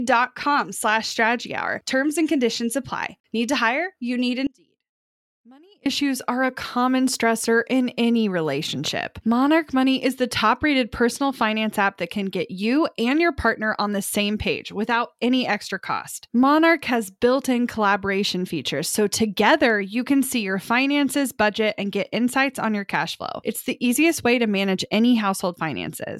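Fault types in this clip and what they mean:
Audio dropout to a faint residue: at 4.47 s the speech cuts off abruptly, leaving only a faint trace about 30 dB below normal for 1.39 s, until it returns at 5.86 s with "issues are a common". The signal was likely lost while the path downstream stayed live.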